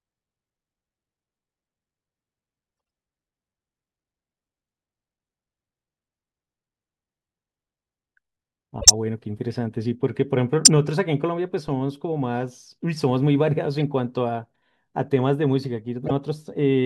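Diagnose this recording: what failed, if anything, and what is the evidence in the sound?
The codec stage failed, with corrupt frames decoded. Brief squeaks and noise bursts occur at 8.80–8.90 s, 10.65–10.68 s, 13.80 s and 16.03–16.11 s, each spanning a few frames. The first two are the strongest, while 13.80 s is faint. Flipped bits in the compressed data made the decoder misplace energy across frequencies for each damaged frame.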